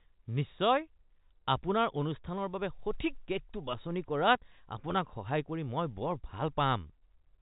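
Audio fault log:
Nothing's wrong here, just ordinary speech carried over G.711 telephone coding, so it has that familiar phone-line sound with nothing above about 3.8 kHz.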